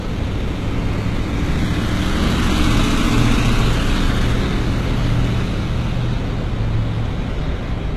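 An everyday sound recording with HE-AAC compression damage that is plainly audible for the whole clip. The spectrum stops at 12.3 kHz, and the treble below that edge sounds synthetic rather than captured: its upper partials do not line up with the lower ones, giving the treble a gritty, metallic edge. That is the signature of spectral band replication, where copied lower bands are shaped to stand in for the real highs. The likely cause is HE-AAC encoding at a very low bitrate, which fits roughly 16 kbps.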